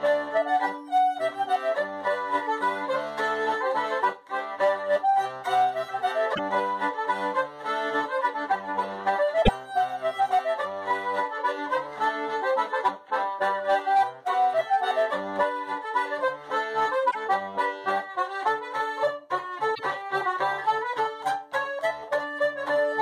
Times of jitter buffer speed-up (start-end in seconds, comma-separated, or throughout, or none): none